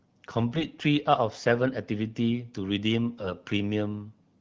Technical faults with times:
0.51-0.66 AMR bit errors

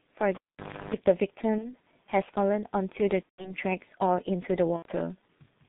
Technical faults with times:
0.00-5.68 G.723.1 codec
0.35-0.94 cable pulled and plugged in
1.58-1.76 VoIP packet loss concealed by the speech codec
3.23-3.55 VoIP packet loss concealed by the speech codec
4.76-4.86 VoIP packet loss concealed by the speech codec

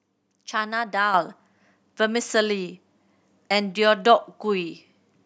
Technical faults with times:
1.14 microphone volume stepped up

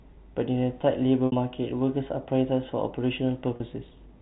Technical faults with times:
1.26-1.32 packet loss with pitch repetition
3.56-3.60 packet loss with pitch repetition

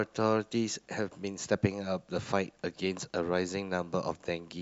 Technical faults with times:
none

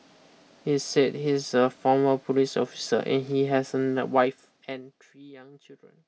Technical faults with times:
3.97-5.18 zipper noise

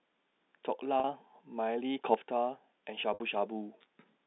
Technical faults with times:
1.00-1.04 packet loss with pitch repetition
2.05-2.14 sudden gain jump
3.14-3.20 packet loss with pitch repetition

